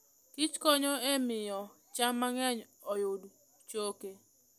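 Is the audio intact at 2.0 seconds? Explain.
Yes, at 2.0 seconds the speech plays through intact, with no dropout, click, distortion or other fault.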